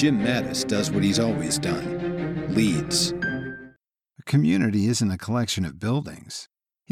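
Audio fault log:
No faults detected; nothing to log.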